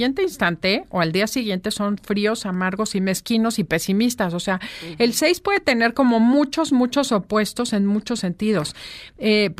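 No technical faults are audible anywhere in the recording.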